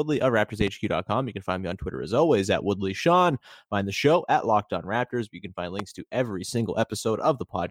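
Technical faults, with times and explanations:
0.61–0.70 s, loud pop: a sudden voltage step, likely from a connector, switch or static discharge, entered the signal path twice in quick succession. The circuitry after it shaped each step into a brief pulse, so two sharp pops stand out at about 15 dB above the speech, which continues underneath.
5.79–5.82 s, loud pop: a single voltage spike, likely from the same kind of disturbance, lands between "can find" and "to every". It gives one short thump at about 10 dB above the speech, which carries on beneath it.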